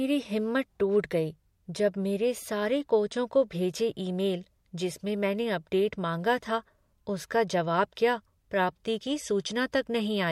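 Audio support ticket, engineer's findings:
Pre-echo at 7.95 s, between "माँगा था उसका जवाब" and "क्या प्राप्ति की": about 10 dB hiss rise over 16 ms before the attack, which sounds softened. Spectrogram shows a broadband smear ahead of the onset. Transform codec. Fits a 26 ms block with no short-block switching.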